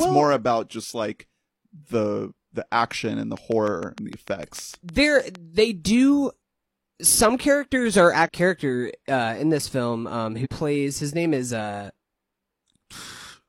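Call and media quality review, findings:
Train of clicks, 3.37–5.36 s, starting after "the action and the": regular ticking at about 6.6 per second, about 15 clicks, peaking about 5 dB above the speech. Likely interference or a faulty connection or power supply. Spectrogram shows evenly spaced thin broadband vertical lines; waveform shows regular spikes.

Damaged data in a compressed stream, 8.22 s, between "some characters are" and "character uh in": a one-off disruption where corrupted frames are misread or rejected. Spectrogram shows a single-column vertical break; waveform a sudden discontinuity.

Damaged data in a compressed stream, 8.22–8.29 s, same landmark: a 66 ms disturbance while the decoder loses sync and searches for the next frame header. Spectrogram shows a short vertical block of disrupted content.

Damaged data in a compressed stream, 10.41–10.47 s: a 64 ms disturbance from the same decoder resync mechanism. 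Spectrogram shows a short break in the harmonic pattern; waveform shows an abrupt envelope change.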